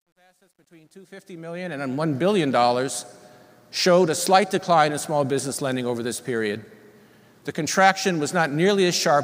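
The fade-in over the first 2.06 s carries truncation distortion on a fade. The quiet start, worst from 0.0 to 1.17 s, turns gritty, which points to an undithered gain stage near 11 bits. Unlike a noise gate, the grit follows the rising level.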